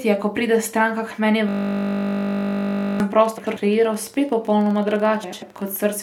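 Just after "pride stranka k meni", from 1.49 to 3.00 s, a system hang loop replays one 20 ms slice of buffer, a 50 Hz buzz that shows as identical repeating waveform cycles and evenly spaced spectral lines.

From 3.12 to 5.77 s, a train of clicks, about forty irregular ticks averaging 15.5 per second and peaking around signal level, likely from interference. Each click appears as a thin vertical streak.

Frames arrive out of order from 3.38 to 3.57 s and again from 5.23 to 5.43 s. Neighbouring blocks of about 93 ms are swapped, which fits four-frame runs, producing a garbled flutter.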